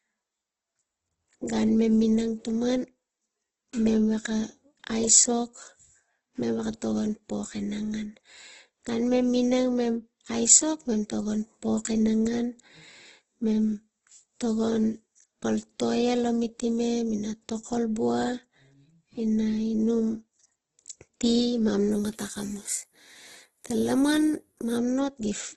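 Throughout the speech, the sound is grainy, rough and noisy. Nothing is present above 12 kHz. The likely cause is Opus compression in its music mode at a very low rate, around 12 kbps. Starved of bits, the encoder fills bands with folded or noise content.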